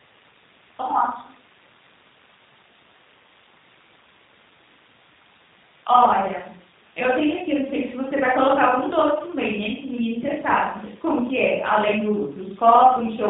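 Throughout, the speech shows plainly audible G.729 codec damage, consistent with 8 kbit/s model-based coding: nothing above 4 kHz survives, and the rebuilt speech sounds rough and synthetic.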